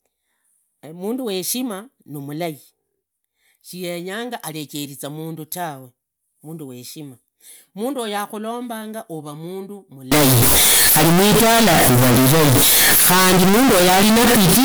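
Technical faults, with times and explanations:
10.12 to 14.65 s, float read as integer: the speech abruptly turns very loud and harsh, a buzzing, near-square wave sitting at an almost fixed, high level, with background noise pushed up to the same level as the voice, though the pitch can still be followed to the end. This is likely 32-bit float samples being read as 32-bit integers, so each sample's sign and exponent bits, not its true amplitude, set the output level.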